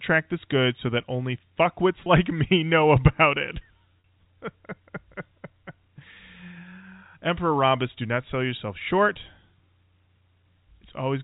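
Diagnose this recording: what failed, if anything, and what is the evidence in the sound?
Packet loss with pitch repetition, in the network. At 2.04 to 2.06 s, after "so that only fuckwits", a 20 ms gap is filled. At 4.00 to 4.04 s, after "me know about it", a 40 ms gap is filled. The receiver repeats the last pitch period, giving a brief buzzy hold.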